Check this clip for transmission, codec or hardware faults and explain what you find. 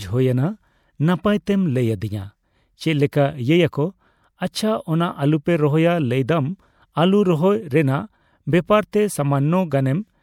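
Two codec faults appear in this speech clip, both pre-echo, at 3.12 s and 8.92 s. Each time, a sharp attack lands late in a transform block, so the quantisation noise that the codec shaped for the loud onset also covers the silence just before it. A brief hiss runs ahead of the attack, about 12 ms early at 3.12 s and 16 ms early at 8.92 s, and the onset sounds softened. On a spectrogram this shows as a broadband smear leading each onset. On the waveform, low-level noise rises before the transient.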